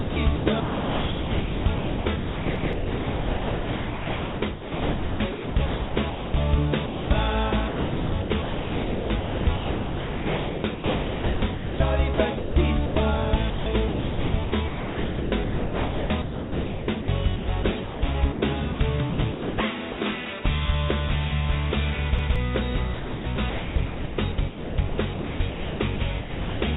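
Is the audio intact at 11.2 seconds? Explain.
No, 11.2 s sits inside a choppy stretch from 7.68 to 12.96 s, likely sound chopped by the voice detector. Roughly 3.8 s of it gets swapped for comfort noise, so the sound drops in and out.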